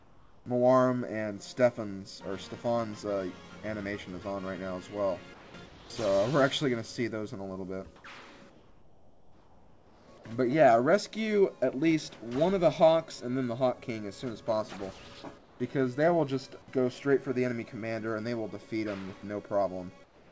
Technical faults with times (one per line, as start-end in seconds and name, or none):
0.00-0.46 comfort noise in place of the background
5.34-5.90 comfort noise in place of the background
7.96-8.04 comfort noise in place of the background
8.50-10.08 comfort noise in place of the background
15.38-15.60 comfort noise in place of the background
20.04-20.32 comfort noise in place of the background